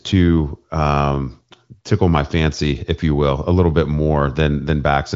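The speech carries no audible technical faults.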